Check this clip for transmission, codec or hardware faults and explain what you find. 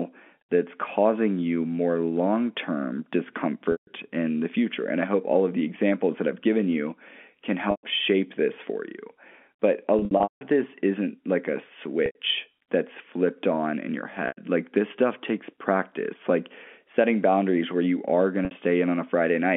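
Packet loss with pitch repetition occurs six times, at 3.72–3.87 s, 7.71–7.83 s (after "I've given you can", before "shape this for"), 9.99–10.41 s (before "this isn't like a"), 12.06–12.15 s, 14.28–14.37 s (after "flipped on in your") and 18.45–18.51 s. The lost spans are 150, 120, 300, 90, 90 and 60 ms. The 9.99 s loss is broken up across 420 ms, with a longest single run of 180 ms. The gap sizes fit 30 ms packets.

The receiver fills each gap by repeating the last pitch period and fading it out over about 50 ms. Each loss therefore starts as a buzzy held tone and then drops toward silence, and the speech returns with a short cross-fade. The telephone coding limits the band to 200 Hz–3.4 kHz.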